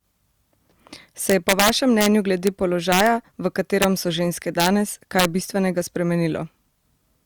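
Integer overflow cracks through the loud parts of the speech from 1.30 to 2.06 s, about 5 dB over the limit, then at 2.47 s, from 2.92 to 3.07 s (about 4 dB), from 3.82 to 3.85 s and from 4.60 to 4.68 s (each about 2 dB), and from 5.19 to 5.25 s (about 1 dB). Peaks that exceed the largest integer wrap to the opposite sign instead of being held at the ceiling. The result is violent snapping cracks rather than the flattened buzz of clipping.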